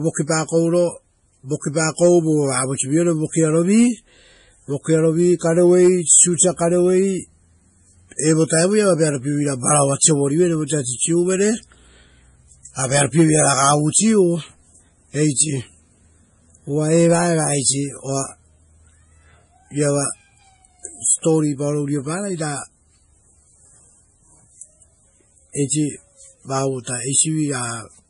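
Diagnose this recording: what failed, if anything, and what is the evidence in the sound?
Codec stage: nothing above 10.6 kHz throughout, with layered smearing that points to transcoding between lossy codecs, likely a low-rate MP3 re-encoded to Vorbis.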